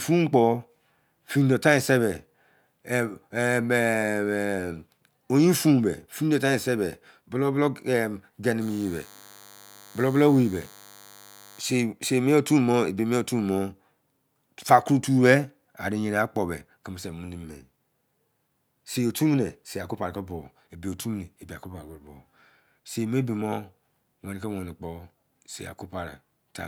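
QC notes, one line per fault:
8.62–11.62 s: DECT cordless phone buzz, a thin 100 Hz buzz rich in harmonics, well below the speech, from rectified radio bursts every 10 ms, unlike smoother mains hum.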